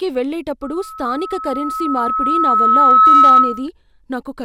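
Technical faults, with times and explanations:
0.62 to 3.68 s, loudspeaker feedback squeal: the microphone re-amplifies its own loudspeaker at 1.3 kHz, where loop gain exceeds one, so a tone swells over about three seconds to roughly 15 dB above the speech.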